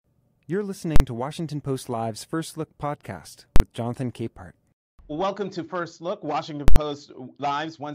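At 0.96 to 1.00 s, 3.56 to 3.60 s and 6.68 to 6.76 s the speech is replaced by invalid numbers at full scale. A calculation produced infinite or invalid values that were pinned to the largest positive or negative value, so for each 40 ms block (80 ms in the last) the output sits flat at one extreme value, far beyond the speech's peaks. With blocks this short, each event lands as one loud bang over the speech.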